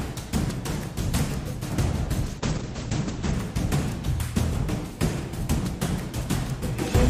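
At 2.25 s there's a call bitrate drop that lasts until about 3.39 s. The bandwidth estimate clearly fell, and the encoder got squeezed hard. It sounds like it went from around 64 kbps down to roughly 10 kbps and sat at the bottom for about 1.08 s. You hear the top end vanish as the audio band shrinks from 20 kHz to 8 kHz, and the sound turns muffled, rough and watery until the rate climbs back.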